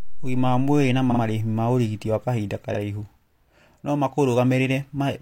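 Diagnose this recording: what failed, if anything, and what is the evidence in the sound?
Stutters at 1.07–1.18 s, before "marĩhi ma ũrigiti wa", and at 2.70–2.75 s, after "ma ũrigiti wa kahinda". These are repeated frames in the codec stream: a 46.4 ms compressed block is played twice more, then once more.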